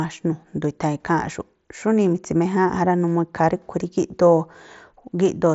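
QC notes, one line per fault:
No faults to log here; the speech comes over a Bluetooth mSBC headset link that's working as it should, with nothing above about 7.7 kHz.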